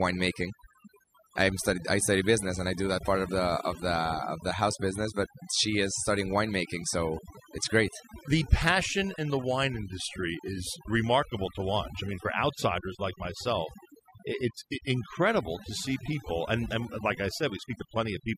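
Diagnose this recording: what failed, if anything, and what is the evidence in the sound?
The background collapses into near-silence with twinkling specks throughout: overdone noise removal in call processing, gating quiet speech bands along with noise.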